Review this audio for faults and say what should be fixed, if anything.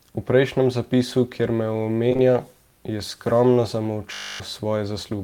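Short concealed packet loss runs from 2.09 to 2.21 s as three back-to-back gaps of about 20 ms each. The receiver bridged each one by extending the preceding sound, leaving a brief smeared wobble where real audio never arrived. Adding more jitter buffer depth and forward error correction on the network path would prevent it.

A system hang loop occurs from 4.14 to 4.40 s. A single 20 ms segment repeats 13 times, producing a steady 50 Hz buzz while the audio device recycled its buffer and roughly a third of a second was lost. Prioritising the audio thread and fixing the driver stall would prevent it.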